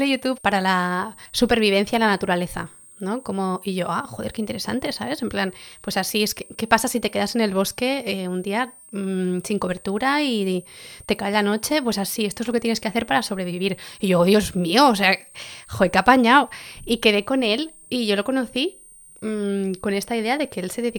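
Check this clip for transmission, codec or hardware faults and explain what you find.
A hardware fault runs through the whole speech clip: a switching supply whistle. It is present from start to finish. A thin, high tone sits under the speech, wandering between about 8.6 and 8.8 kHz. It stays roughly 25 dB below the speech level. A switching power supply near the audio path is oscillating in an audible range. As its load shifts, the pitch slides within that narrow band instead of holding steady.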